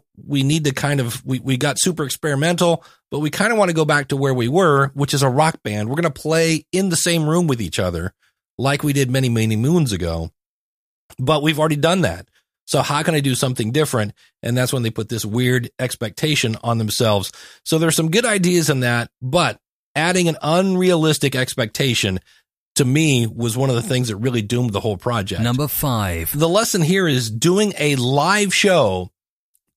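A speech recording with no technical problem audible anywhere in it. There is nothing to place at a time or trace to a cause.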